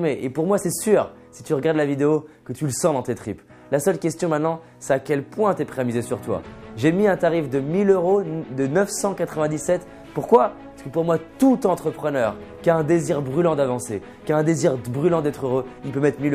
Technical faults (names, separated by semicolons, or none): none